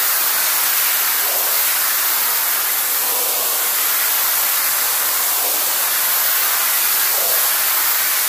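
No technical faults are audible.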